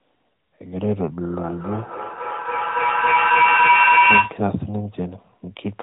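Feedback howl runs from 1.37 to 4.51 s. Sound from a loudspeaker re-enters a microphone on the same call, gaining level each trip, so a tone around 1 kHz swells to about 10 dB above the speech, pulsing roughly every third of a second, within the narrowband band that stops near 3.8 kHz.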